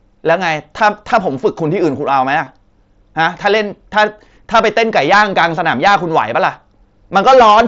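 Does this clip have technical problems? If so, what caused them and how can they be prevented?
Yes. Hard clipping occurs at 0.29–0.34, 0.82–1.46, 3.21–3.57, 3.97–4.04, 4.55–6.48 and 7.16–7.61 s. The speech peaks overran the level a stage could pass by about 2 to 4 dB early on and about 9 dB in the last two stretches, so the tops were sliced flat, adding crackle and, at 9 dB, a harsh fuzz on every loud syllable. Lowering input gain or adding headroom before the converter prevents this.

Concealed Bluetooth headset packet loss appears at 2.44–2.47 s, on audio carried over the wideband mSBC headset link. About 22.5 ms of audio went missing between headset and phone, which fits three lost frames, and the receiver patched the gap by repeating recent waveform, leaving a brief buzzy fill. Keeping the headset close to the phone and away from Wi-Fi or other radio interference reduces these dropouts.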